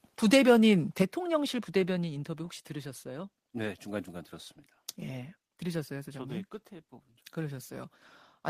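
At 1.00 to 1.02 s the loudest part of the speech breaks into a short, harsh crackle with flattened tops. This is microphone overload, likely from input gain set high enough that the peaks overran the converter by about 3 dB. Only a small fraction of the samples in that span are clipped, so the distortion is a brief edged burst.

At 1.02 s, directly after that distorted peak, the speech and the background drop in level together by about 6 dB in a single step. This is a microphone volume step-down, likely applied by the call software when it detected the clipping and lowered the device's input gain. Because the change is one abrupt step rather than a smooth fade, it sounds like a sudden sag in loudness that stays at the lower level.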